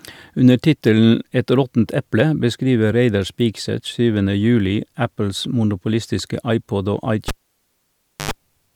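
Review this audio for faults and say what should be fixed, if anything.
A live cable was pulled out and plugged back in near the end of this speech recording. At 7.28 s the connection breaks with a pop and the signal drops to near silence for about 0.98 s. As the plug goes back in, only the tip touches at first, letting through a 50 Hz mains buzz lasting about 87 ms, before a second pop at 8.31 s restores the sound. Muting the channel before touching any connector, and securing cables so they cannot be disturbed mid-take, would prevent this.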